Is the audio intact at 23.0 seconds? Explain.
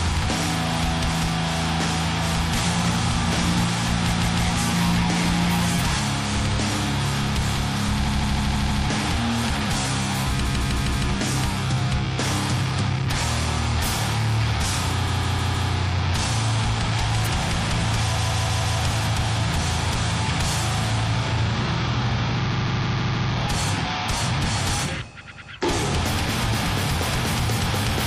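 No, 23.0 s sits inside a stretch of repeated frames running from about 22.51 to 23.29 s. A 156.7 ms chunk of the compressed stream, which fits about six MP3 frames, got written or sent over and over. The decoder plays it five extra times, so you hear a quick stutter looping the same sliver, and the audio runs about 0.78 s longer.

Under that, there's plainly audible MP3 compression across the whole clip. It sounds watery and swirly, with a dulled top end and smeared attacks. That's likely from a low-bitrate encode around 64 kbps, where the encoder cuts the treble and lets weak frequency detail flicker in and out from frame to frame.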